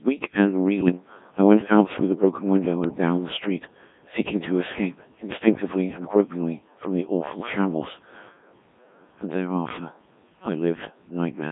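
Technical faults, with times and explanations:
Throughout, Codec 2 vocoder: speech rebuilt from pitch and envelope at 1.3 kbit/s, hence heavy robotic buzz, squeezed into roughly 150 Hz to 3.6 kHz.
0.80–0.92 s, bit errors on digital voice radio: a burst of heavy errors, around one in ten bits, hits two frames, so pitch and level lurch into a brief warbly bleep.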